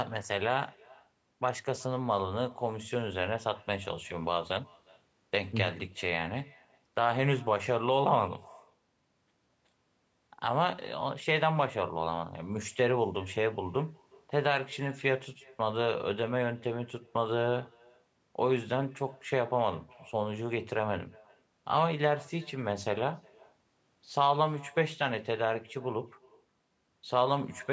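A speech recording carrying echo with no canceller throughout: a faint copy, about 28 dB down, trails each phrase by around 400 ms, showing as ghost syllables on the waveform, while the spectrogram stops at 8 kHz.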